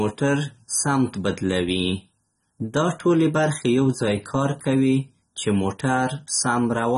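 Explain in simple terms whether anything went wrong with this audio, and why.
Yes, from start to finish the speech sounds dull and plainly watery, with nothing above about 11.7 kHz. That is likely AAC compression squeezed too hard. A simple treble cut would only sound muffled; this also adds a warbling, fizzy smear to hissy sounds.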